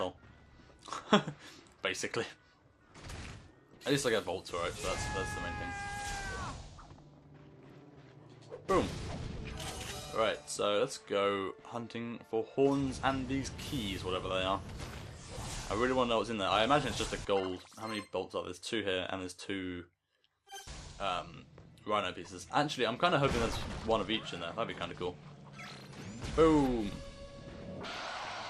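MP2 compression runs throughout, with a plainly audible dull top end and a gurgling, granular texture. Upper sub-bands drop out and flicker while the remaining ones are coarsely quantised. This is likely MPEG Layer II coding short of bits, consistent with a rate around 80 kbps.

DAB burbling occurs from 9.45 to 9.74 s and again from 27.81 to 28.30 s. Both bursts put short blips of noise into single sub-bands. Bit errors have slipped past error correction into the audio data. The second burst is longer and denser, which points to an error rate somewhat higher than in the first, though still under one percent.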